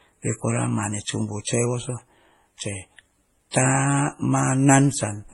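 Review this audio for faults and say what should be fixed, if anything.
The speech carries stacked compression damage from start to end. Nothing survives above 11.5 kHz, so sibilants sound dull. Swirly, smeared artefacts from one coder sit on top of another coder's blurring. This is likely transcoding between lossy codecs, with an MP3 pass followed by HE-AAC. Both stages sound starved, which fits low rates around 32 kbit/s. The second coder spent its bits re-encoding the first one's errors. To prevent it, encode only once, directly from the original uncompressed source.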